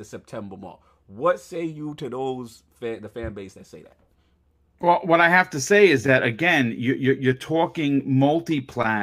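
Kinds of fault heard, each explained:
No technical faults can be heard in this recording. The speech carries on without any audible disturbance.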